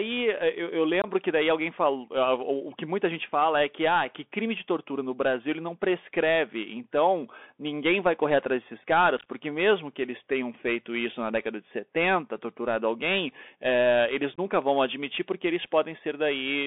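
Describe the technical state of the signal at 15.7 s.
At 15.7 s, as throughout, the speech carries Bluetooth CVSD headset codec damage. Single-bit up/down steps with adaptive size code it within a narrowband 250 Hz–3.5 kHz channel, leaving plainly audible granular, scratchy distortion.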